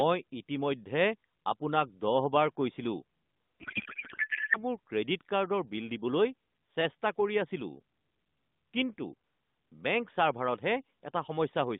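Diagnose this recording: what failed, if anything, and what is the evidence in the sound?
From 3.60 to 4.65 s the speech collapses into garbled warble that barely tracks it. This is a codec payload misread, fitting octet-aligned AMR frames unpacked as bandwidth-efficient.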